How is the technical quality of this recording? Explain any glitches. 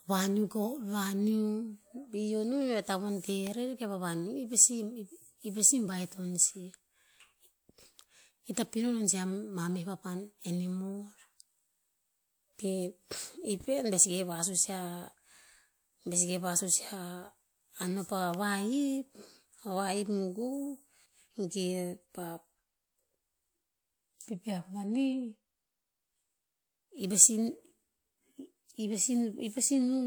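Two sharp snaps in the speech, at 3.47 s and 18.34 s: an electrical switching spike, likely a nearby switch or static discharge arcing briefly and getting picked up by the audio line.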